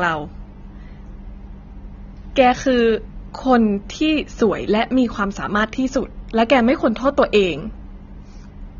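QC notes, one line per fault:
throughout, AAC compression: likely AAC-LC coding at a rate that fits 24 kbps, starving the upper bands, so speech sounds plainly dull and smeared, with fizzy, warbling sibilants.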